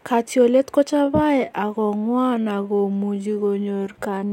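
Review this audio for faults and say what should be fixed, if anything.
From 0.87 s to the end, the speech abruptly slows to about 0.67 times its pace while pitch holds steady, so it drags. This is likely a time-stretched section, lengthened by repeating short slices of audio to fill a longer slot. Fit the material by editing or re-recording rather than stretching it this far.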